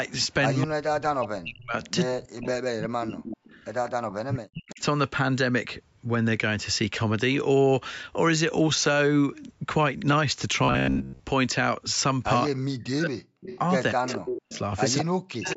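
At 0.08 to 0.12 s a very faint echo leak appears: a copy of the speech delayed by 210 ms and lying far below it. The likely cause is a far-end loudspeaker whose echo canceller let some of its microphone pickup through and sent it back.

From 0.63 to 4.81 s the speech is suppressed in double talk. Across roughly 3 s of that span the level dips and breaks up, falling by as much as about 40 dB at its deepest. This likely comes from an echo canceller that could not separate the local talker from the loudspeaker echo while both sides spoke, so it turned both down. Overlapping this, from 1.83 to 4.82 s, the echo leak returns much stronger, at about 15 dB below the speech and again 210 ms late, as a trailing copy.

From 10.64 to 11.21 s the speech turns into a rigid, metallic buzz at 66.8 Hz that still roughly follows the speech contour. This is robotic sound from repeated short buffers, likely caused by audio arriving too seldom, so most of the stretch is made up of repeats of the last fragment. 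The buzz rate fits a buffer of about 15 ms.

From 12.5 to 15.57 s double-talk suppression cuts in again, for about 1.5 s in total and again dropping by up to about 40 dB. From 13.41 to 15.53 s the 210 ms echo leaks back at about 10 dB below the speech, the most audible it gets in the clip.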